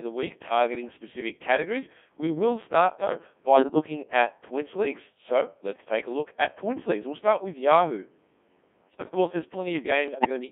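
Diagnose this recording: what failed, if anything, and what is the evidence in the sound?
Codec 2 vocoder, across the whole clip, is a codec-stage fault. The speech is robotic and buzzy, confined to a band of about 200 Hz to 3.5 kHz, with heavy synthetic colouring that fits Codec 2 running at 1.6 kbit/s. The decoder does not keep the original waveform. It rebuilds the voice from sine waves driven only by pitch, voicing, energy and a coarse spectral envelope, and that resynthesis is what produces the buzz.

Bit errors on digital voice radio appear from 3.56 to 3.86 s, between "will start though" and "at points leagues", and again from 10.08 to 10.29 s. These are transmission-stage faults. In both spans the synthetic voice lurches in pitch and level and breaks into warbles and bleeps. The first burst suggests about six corrupted frames and the second about five, at an error rate of around seven percent. 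Because each bit steers a whole frame's parameters, a few flipped bits are enough to scramble the sound.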